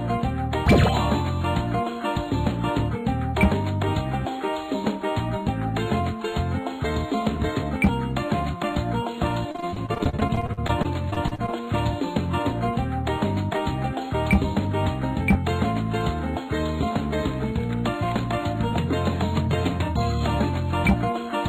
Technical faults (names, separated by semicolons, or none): repeated packet loss (robotic sound)